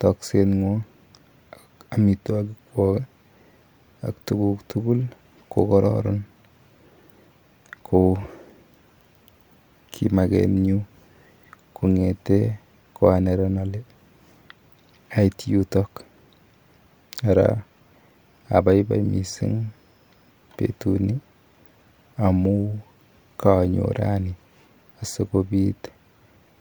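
No technical faults are audible.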